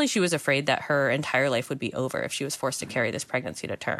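No technical faults can be heard anywhere in the recording; the signal stays continuous and intact throughout.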